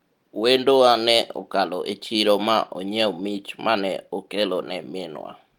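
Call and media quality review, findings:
Clock drift between sender and receiver, whole clip. Sender clock runs around 4% fast, so the receiver jitter buffer keeps filling. Slight, uneven rushing throughout. Waveform shows small, irregular discontinuities instead of one clean event. Spectrogram shows faint vertical seams scattered across the clip.

Repeated timing corrections, 0.24 s to end. The receiver drops short pieces to keep pace with a sender running at 104% speed. The hiccups are small, unevenly spaced and all cuts. The waveform shows shortened cycles at splice points. The spectrogram shows brief broadband ticks at irregular intervals.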